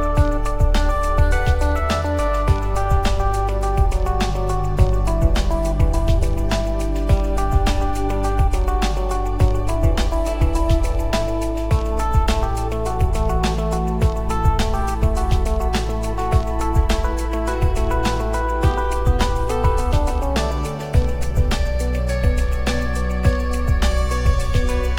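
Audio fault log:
No fault found.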